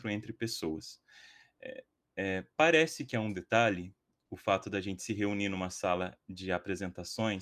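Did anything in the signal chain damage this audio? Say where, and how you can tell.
No, nothing in the chain from capture to playback left an audible mark on this speech.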